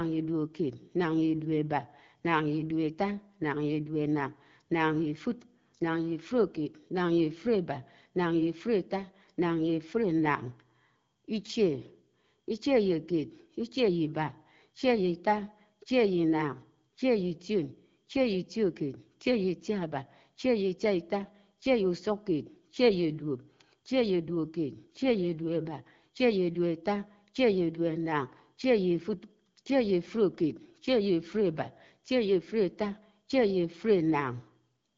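Nothing stood out on listening to this speech, which comes through the AMR wideband (HD Voice) codec at 12.65 kbit/s with the clarity that rate gives.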